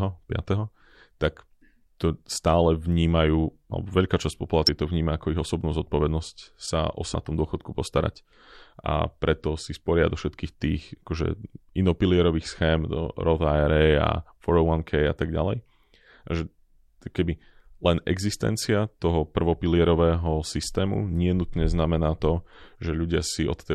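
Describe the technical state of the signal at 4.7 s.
Damaged data in a compressed stream, 4.67 to 4.69 s: the decoder misreads corrupted frames and resynchronises, giving a short chirp, squawk, click or hole.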